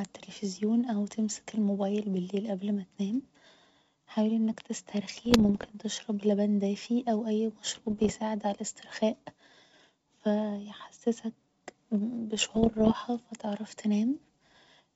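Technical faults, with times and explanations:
5.16–5.73 s, 7.66–8.13 s and 12.37–12.95 s, bit errors on an ADPCM link: three half-second bursts of pops and rough, crackly patches with brief jumps in level, on top of the clean 7 kHz G.722 wideband sound. Around one bit in a hundred is getting flipped, and each one throws off the decoder's step size and prediction, so the damage rings on for a few milliseconds.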